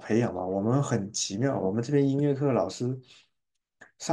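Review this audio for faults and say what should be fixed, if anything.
Nothing in this speech recording needs fixing. No fault can be heard at any point, so no change is called for.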